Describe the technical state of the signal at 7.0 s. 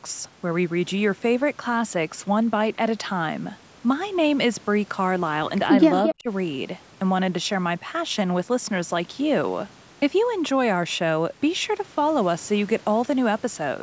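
At 7.0 s the speech signal is intact, carrying only the ordinary shaping of call microphone processing, with its bass trimmed by the high-pass filter and nothing above 8 kHz.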